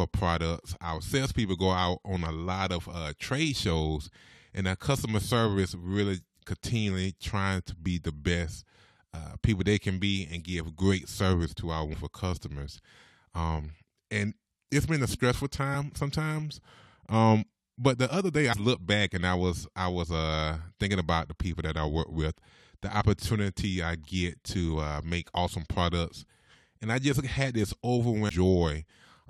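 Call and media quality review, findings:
Damaged data in compressed speech stream: brief glitches at 11.92, 15.73, 18.52–18.54, 23.00–23.02 and 28.29 s. Decoder misreads corrupted frames, loses sync, resyncs at next header.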